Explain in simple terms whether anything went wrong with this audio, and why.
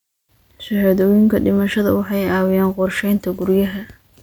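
Nothing went wrong here; the speech comes across steady and unbroken, with no glitches, dropouts or odd noises to point to at any moment.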